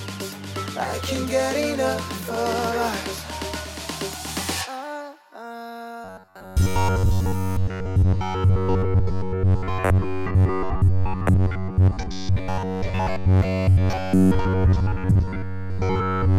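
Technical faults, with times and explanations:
6.04 to 16.38 s, robotic sound from repeated short buffers: a fixed 93.8 Hz buzz, likely from looping one 10.7 ms block over most audio; spectrogram shows rigid evenly spaced harmonic stripes.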